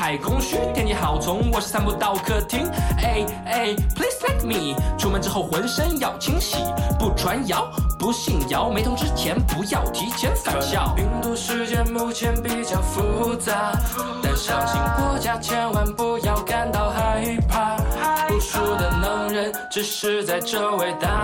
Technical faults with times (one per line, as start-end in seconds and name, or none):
8.78-9.48 drift correction step
16.98-17.90 drift correction step